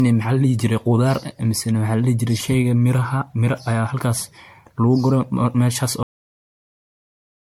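From the start, the speech has a swirly, smeared, hollow quality, with consonant attacks blurred and a watery shimmer around the voice. That points to generation loss, the likely cause being repeated MP3 re-encoding at 96 kbit/s, something like fifteen passes. Each pass requantises on a shifted frame grid, so errors pile up. On a spectrogram this shows as flickering holes and smeared blocks in the upper bands, with transients spread in time.

At 6.03 s the speech is cut off mid-sound and drops straight to digital silence, which runs to the end of the clip. This is a cut-off end: the final buffers were never written, so there is no natural decay. On the waveform the signal stops abruptly mid-waveform and then becomes a flat line. On the spectrogram, energy ends in a sharp vertical edge followed by empty black.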